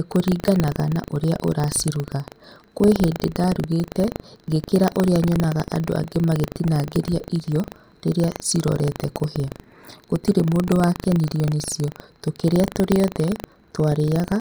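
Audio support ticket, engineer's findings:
Buffer tearing, throughout: 25 Hz robotic rattle under speech. Ring-buffer writer and reader cross each 40 ms period, splicing in a small slice about a tenth of a second old.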